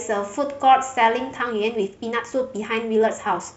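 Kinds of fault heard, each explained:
Time-stretched section: from about 1.37 s to the end, the speech suddenly runs about 1.36 times faster while its pitch holds steady, sounding rushed, likely from software dropping short pieces to shorten it; a spectrogram shows compressed syllable spacing with unchanged harmonic frequencies.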